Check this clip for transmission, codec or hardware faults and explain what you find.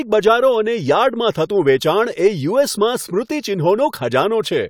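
Nothing in the signal points to a transmission, codec or hardware problem at any point in the speech.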